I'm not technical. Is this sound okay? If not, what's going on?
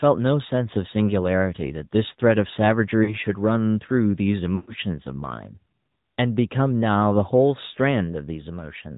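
No. The whole recording has gone through the AMR narrowband mobile codec, the compression used for ordinary mobile phone calls. It keeps only the lower part of the sound, nothing above 4 kHz, so the speech sounds boxed-in and plainly buzzy and synthetic throughout. That steady, all-the-way-through dullness is what separates it from a bad microphone or a muffled room, which would not add the buzzy, computer-made edge.

There are also two moments of lost AMR speech frames, where pieces of the signal were damaged on the radio link and the phone had to fill the gap by guessing. At 3.04 to 3.16 s a short chunk, about 40 ms and consistent with two missing frames, comes out as a brief wobble. At 4.56 to 4.74 s a longer stretch of about 120 ms is smeared and fades toward silence before the speech returns. Unlike a simple dropout, the gaps are papered over with stretched, fading sound rather than clean silence.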